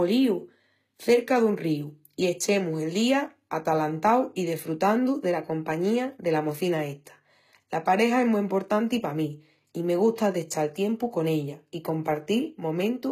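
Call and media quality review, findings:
HE-AAC compression, whole clip: speech treble gritty and lispy on s sounds, nothing above 14.9 kHz. Likely an HE-AAC v2 encode near 20 kbps, band replication rebuilding the top from copied lower bands, so harmonics don't line up.

Pre-echo, 10.16 to 10.18 s, between "pa mí i me" and "d'echal tiempu con ella": a brief hiss of about 21 ms just ahead of an attack, which sounds smeared. The codec's quantisation noise, sized for the loud onset, spreads backward across its block.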